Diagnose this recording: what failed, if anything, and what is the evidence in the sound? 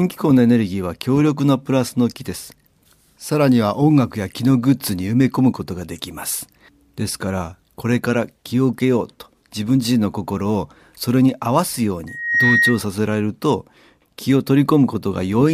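A pure, piercing tone near 1.9 kHz rises out of the speech at 12.07 s, swells over roughly a third of a second to sit about 5 dB above the speech, and stops at 12.83 s. That is loudspeaker feedback squeal, a failure in the analogue acoustic path. The microphone was picking up the loudspeaker it feeds, and at 1.9 kHz the loop gain passed unity, so that frequency reinforced itself on each pass.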